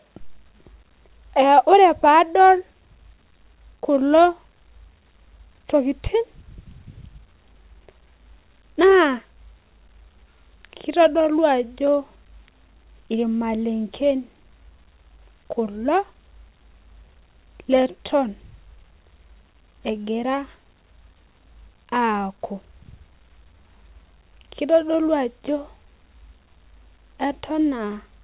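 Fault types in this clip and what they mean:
No faults turn up anywhere in the speech. It reached the listener over a WebRTC call path using G.711 A-law at 64 kbps, so nothing is heard above 4 kHz.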